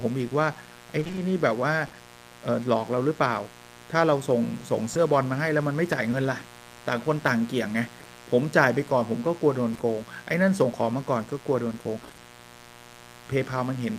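A raspy mains buzz runs under the whole recording, roughly 20 dB below the speech. Switching spikes at twice the 60 Hz line rate are leaking in, so a spectrogram shows a dense comb of 60 Hz harmonics climbing into the kilohertz range as steady horizontal lines.

From 0.99 to 1.95 s, repeated packet loss gives the speech a choppy, robotic quality. The receiver patched a string of holes, none longer than 20 ms and together about 140 ms, by extending the preceding sound. The waveform shows repeated smeared, periodic-looking patches.

Short concealed packet loss follows at 4.93, 6.11, 7.99, 8.03, 9.73 and 9.77 s. Each is a 20 ms gap filled by continuing the last sound, the later two pairs back to back. Each is heard as a brief smear or wobble, and on a spectrogram as a blurred vertical sliver.

At 12.03 to 12.19 s the repeated packet loss returns more densely. Half of that 160 ms stretch is concealed, making a short burst of robotic stutter.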